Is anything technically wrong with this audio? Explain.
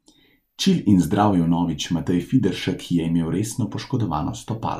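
No, nothing is technically wrong with this speech recording. No point in it reveals a fault in how it was captured, processed or played back.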